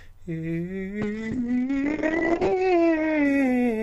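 From 1.02 s to the end of the music, a call bitrate drop takes hold. The encoder's target falls from 128 kbps to 6 kbps, so each frame is coded far more coarsely, and the audio band shrinks from 20 kHz to 8 kHz. The top end goes dull and muffled, while the remaining detail turns rough and watery. The lowest rate holds for about 1.23 s, and the quality is still degraded when the clip ends.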